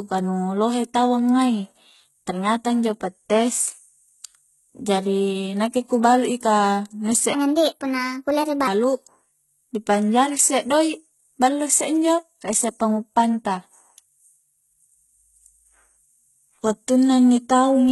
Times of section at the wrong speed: 7.33-8.67

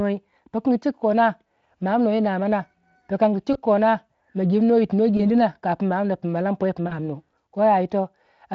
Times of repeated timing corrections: none

